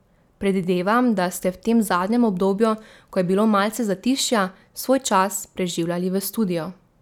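Nothing in this speech recording stands out as a technical fault anywhere along the way, so there's nothing to flag here.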